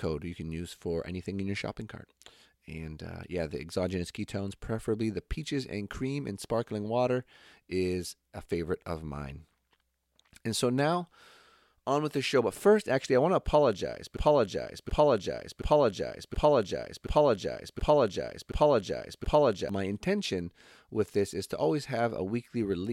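From 14.17 s to 19.69 s the speech falls into a broken-record loop: a 0.72 s fragment plays eight times back to back, each repeat identical, before the audio resumes at "my intention with this". The player or stream likely stalled and kept resending the last piece it held, so the speech due in those five and a half seconds is gone. Unlike an echo, nothing decays or overlaps; unlike a short stutter, the repeated piece is long and exact.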